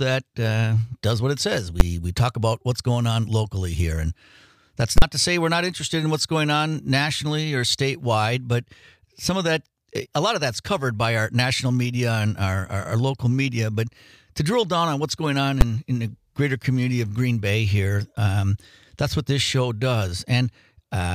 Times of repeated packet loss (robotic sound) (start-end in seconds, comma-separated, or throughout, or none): none